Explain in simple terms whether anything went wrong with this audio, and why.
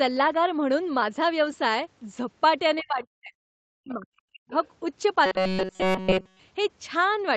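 Yes, several things went wrong in this speech clip.

From 1.41 to 1.51 s there is a lost packet rebuilt from error correction. A few pieces of audio went missing in transit. The pieces that arrived next each carried a small, low-quality backup copy, and the receiver played those backups instead. So there is no silent gap. For about 60 ms the sound turns rougher and a little noisy.

Next comes speech suppressed in double talk, from 2.82 to 3.34 s and again from 3.68 to 4.54 s. The talker's voice drops very sharply, almost to nothing, for about half a second and then about a second. The likely cause is both people talking at once. The echo remover could not tell the talker apart from the other side's voice coming out of the loudspeaker, so it turned everything down.

There are also two brief spots of the other side's voice leaking through, at 3.89 to 3.94 s and at 4.64 to 4.68 s. They are short, faint scraps of a second voice. 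The first is quiet and the second is quieter still. This is likely sound from the talker's loudspeaker that the echo remover failed to fully clean out of the microphone.

From 5.26 to 6.39 s there is robotic sound from repeated short buffers. The voice becomes a rigid, metallic buzz at about 188 Hz. That pitch fits a tiny slice of about 5 ms being replayed over and over. The likely cause is fresh audio arriving too slowly, so the software kept repeating the last slice while the real sound was skipped.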